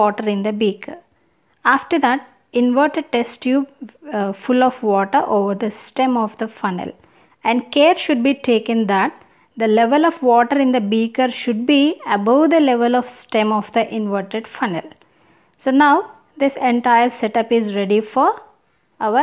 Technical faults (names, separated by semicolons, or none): none